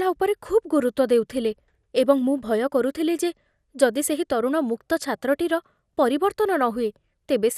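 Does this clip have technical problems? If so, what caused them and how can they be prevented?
Yes. MP2 compression throughout the speech: nothing above 15.2 kHz, with a dull, gurgling graininess, likely from too few bits per sub-band at a rate that fits about 80 kbps. To prevent it, encode at a higher bitrate or use a lossless format.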